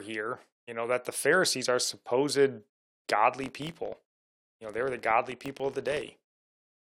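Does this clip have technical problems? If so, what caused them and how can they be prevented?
Yes. From 3.34 s to the end, a filter restarted on every block starts each block from silence, producing a level-following 43.1 Hz buzz consistent with 1024-sample blocks. Preventing it means carrying the filter's state variables over between blocks instead of resetting them.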